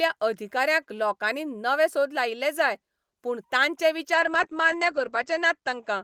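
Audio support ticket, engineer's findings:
Call bitrate drop, 4.14 s to end: speech rough, muffled. Bandwidth estimate fell, Opus encoder 40 to 10 kbps. Spectrogram: everything above 8 kHz gone.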